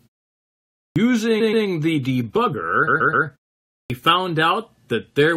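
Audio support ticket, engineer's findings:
Clipped start after a pause at 0.86 s and 3.80 s. Speech onset missing after silence (0.86 s and 0.51 s), roughly 0.1 s lost each time, words begin abruptly. Probable component: output device powering down in silence, slow to wake or relock. The beginning of the sound itself is gone, not just the room tone between sounds.

Repeated frames at 1.40 to 1.65 s and 2.87 to 3.25 s. Stutter: the same 128 ms block plays twice more, then three more times. The block length fits a run of about six compressed frames written or sent again. Unlike a dropout, there is no gap and nothing is lost. The audio is lengthened by 0.26 s and 0.38 s respectively. Probable component: the encoder output, transport or buffering stage duplicating frames before decode.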